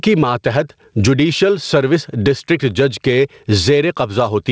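Gain pumping runs through the whole speech clip, with the level swinging by something like 15 dB. The likely cause is the input gain being set way too high, with a fast limiter or compressor clamping down on each loud moment. That squashes loud and soft parts together. Over a call path that stops at 8 kHz, it comes across as a flattened sound.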